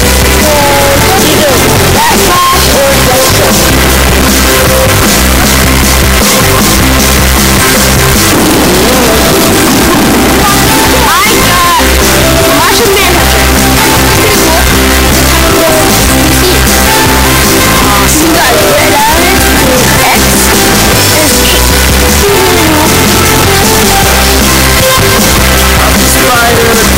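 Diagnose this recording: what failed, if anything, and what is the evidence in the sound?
The failure sits at the sample-format conversion stage: audio stored as 32-bit float was likely read as 32-bit integer, a float read as integer fault. Each sample's sign and exponent bits then dominate the resulting value, so the waveform becomes nearly square and pinned at an almost constant high level for the whole recording, however quiet the original. The sound is very loud and harsh, with background noise as loud as the wanted sound.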